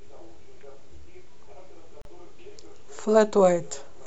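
At 2.02 s the speech drops out for 36 ms, ending at 2.05 s: a gap at a join of encoded pieces. Separately encoded segments were spliced without trimming the encoder's leading delay and final-frame padding, leaving a short silence with smeared edges before the sound resumes where it stopped.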